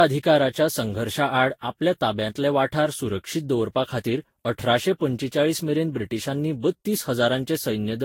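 Speech that carries generation loss from start to finish: the sound is swirly and hollow, consonant attacks smear, and nothing is present above 16.6 kHz. The likely cause is repeated lossy re-encoding, around seven passes, with a character that points to Vorbis at roughly 60 kbit/s. A single encode at that rate would leave cleaner attacks and fewer holes; here each pass has quantised again on a shifted frame grid, stacking noise and spectral gaps.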